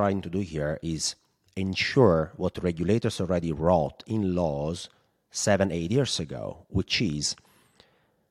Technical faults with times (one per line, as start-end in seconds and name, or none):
none